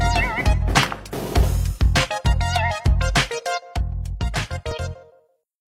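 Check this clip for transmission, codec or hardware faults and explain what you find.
Three faults can be heard: mains hum at the start, a one-channel dropout near the end, and a skip from overlapping stream segments.

From 0.0 to 1.75 s there is mains hum. A ground loop or a nearby transformer lets the 50 Hz power line leak into the signal path. It sounds like a steady low drone under the audio, around 20 dB below the programme level. The hum stops abruptly at 1.75 s, so it comes from the capture or connection and is not part of the sound itself.

From 3.60 s to the end, the level drops suddenly by about 6 dB. That pattern points to one channel dropping out. The likely cause is that one stereo leg of the feed was lost, for example through a failing cable, connector or input. When the two channels are folded to mono, whatever was shared between them is left at half amplitude, and whatever was only in the missing channel is gone.

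From 4.72 to 4.74 s, there is an overlap between stream segments. The time stamps of two adjacent segments, which fit a segment length of 6 s, claimed the same stretch of time. The player discarded the overlap even though that sound was not actually duplicated, so about 26 ms of audio is missing and the waveform jumps across the gap. It is heard as a brief click or a tiny skip in the ongoing sound.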